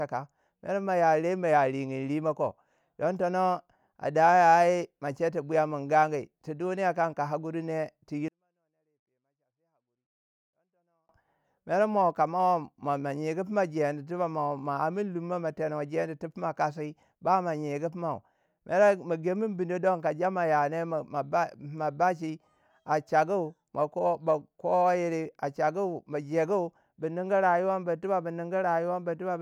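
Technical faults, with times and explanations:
8.28–11.09 s, 24-bit alignment error (too quiet): 24-bit samples held in the low bytes of 32-bit words were read as full 32-bit integers, shrinking every value by about 48 dB, so the speech stays clean but abruptly drops to near inaudibility.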